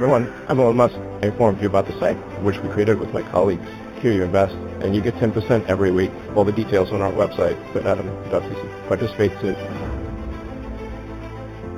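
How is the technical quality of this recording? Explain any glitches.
The recording is band-limited and slightly metallic throughout. Its top end sounds dull, and a faint shimmer clings to bright, hissy sounds. This is imaging from linear upsampling. The audio was raised to a higher rate by joining samples with straight lines, which fits a source near 8 kHz converted to 44.1 kHz. That weak filter leaves a mirrored copy of the band between 4 and 8 kHz, roughly 30 dB below the signal.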